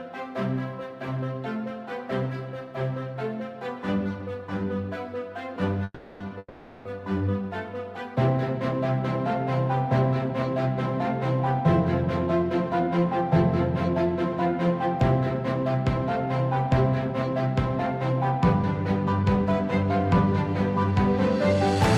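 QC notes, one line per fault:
5.84–6.22 s and 6.38–6.87 s, call audio freeze: twice in quick succession the audio halts and the last sound is held as a buzzy continuation that fades, leaving a brief silence of about 30 ms before playback returns. Nothing is lost. The sound resumes exactly where it stopped, so each stall inserts a gap, 360 ms and then 470 ms, and playback ends up later. This likely comes from packets delayed in transit draining the jitter buffer.
12.27–21.76 s, jitter buffer speed-up: from here to near the end the sound plays about 3% fast with no change in pitch. It comes across as slightly faster rather than raised. The receiver is trimming short pitch-period-length pieces over and over to work off excess buffered audio, about a third of a second in total. This is consistent with a backlog left after delayed packets arrived together.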